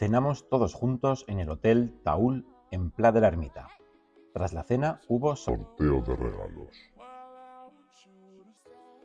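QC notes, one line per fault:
5.49 to 8.57 s, wrong sample rate: the sound abruptly slows and drops in pitch, then returns to normal. It runs at 0.689 times its proper speed, and pitch falls by 6.45 semitones. The samples are being clocked out more slowly than they were captured, with no conversion between the two rates. Speed and pitch therefore sink together by the same ratio. That ratio fits material recorded at 32 kHz and played back at 22 kHz.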